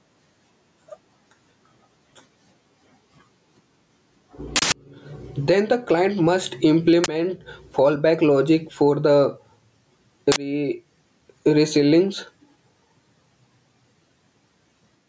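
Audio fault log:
throughout, gain pumping: loud and soft parts sit closer in level and the sound is squashed, with about 15 dB of swing, likely from excessive microphone gain driving a fast limiter.
4.56–4.72 s, 7.04–7.08 s (just after "the client must"), 10.32–10.36 s, uninitialised buffer: loud cracks or bursts of digital noise, one of 160 ms and two of 40 ms, where stale memory was played back as audio.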